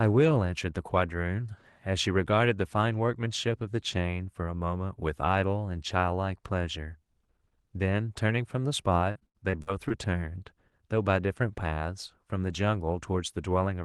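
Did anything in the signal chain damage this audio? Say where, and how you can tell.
Yes, at the network stage. From 9.11 to 9.92 s the speech turns choppy and robotic. This is repeated packet loss. Six short holes, the longest about 74 ms, are patched by stretching the previous sound. That covers about a quarter of the stretch.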